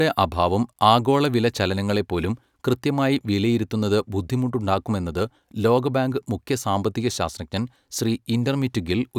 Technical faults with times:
none

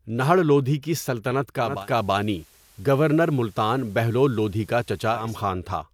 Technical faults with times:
1.58-5.40 digital radio blending to analogue

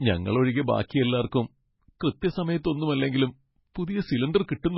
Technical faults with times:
0.00-4.78 MP3 compression
0.88 pre-echo
2.00-2.22 pre-echo

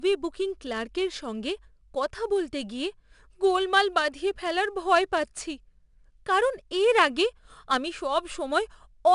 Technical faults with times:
0.00-9.14 4-bit ADPCM compression

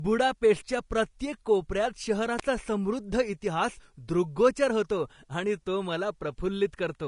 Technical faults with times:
0.00-7.07 Vorbis compression
2.39 electrical switching spike

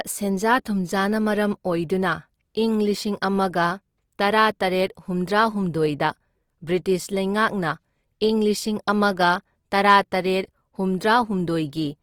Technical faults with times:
0.00-12.02 Opus compression

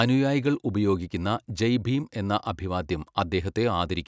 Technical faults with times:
none

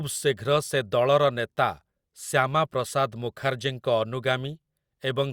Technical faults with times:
none

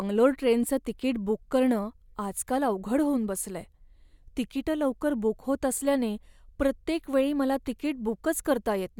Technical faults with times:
none

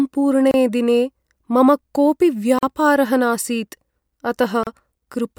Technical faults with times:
0.51-0.54 gap at a join of encoded pieces
2.59-2.63 gap at a join of encoded pieces
4.63-4.67 gap at a join of encoded pieces

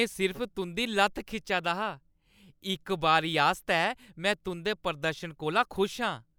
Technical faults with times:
none

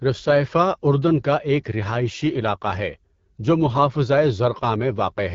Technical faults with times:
0.00-5.35 AMR wideband (HD Voice) codec

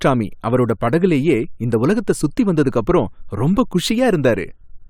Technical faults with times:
none

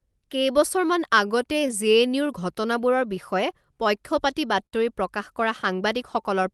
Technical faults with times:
0.00-6.54 clock drift between sender and receiver
0.18-5.90 repeated timing corrections
4.66-4.75 short stall from a late packet

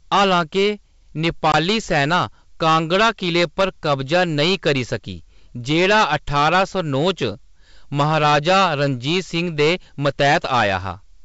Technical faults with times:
0.00-11.24 hard clipping
1.52-1.54 packet loss on an ADPCM call

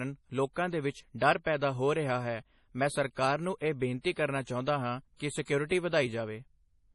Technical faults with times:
0.00-6.95 MP3 compression
1.44-1.47 pre-echo
4.12-4.16 pre-echo
4.42-4.47 pre-echo
5.67-5.71 pre-echo

